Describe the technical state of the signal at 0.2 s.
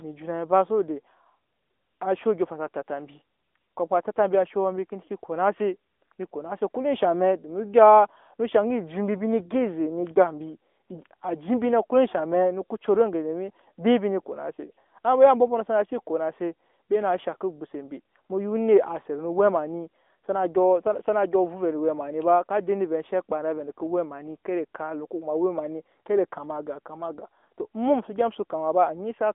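At 0.2 s, AMR narrowband mobile codec damage, present throughout, band-limits the speech to about 250 Hz to 3.5 kHz. Its buzzy, synthetic quality fits roughly 10 kbps. A spectrogram shows an empty region above 3.6 kHz.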